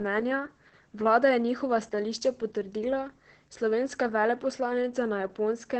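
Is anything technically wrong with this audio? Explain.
Yes. Opus voice compression runs throughout the speech. The heavily muffled, hoarse, slightly robotic timbre points to the SILK linear-prediction coder at roughly 10 kbps, coding the excitation coarsely in 20 ms frames. Nothing is present above 16.5 kHz.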